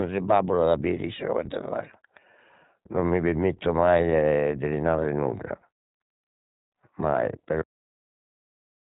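Throughout the clip the speech sounds narrow, slightly rough and synthetic, with plainly audible coding damage and nothing above about 3.8 kHz. This is the iLBC codec, coding each short frame's excitation independently; the sound fits its 20 ms frame, 15.2 kbps mode.

At 7.62 s the speech stops abruptly in the middle of a sound and drops straight to digital silence with no decay, staying silent to the end. This is a cut-off end: the final buffers were never written or played out.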